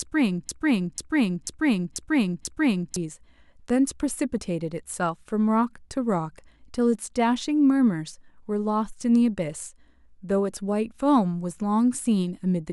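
From the very start until about 2.96 s, the speech is caught in a broken-record loop that is already running when the clip begins. A fragment of roughly 0.49 s plays five times back to back, each pass identical, and whatever should have been heard in that span is gone. The likely cause is a stalled player or stream resending the last chunk it held. Unlike an echo, nothing fades or overlaps; the same slice simply restarts, exact and undecayed.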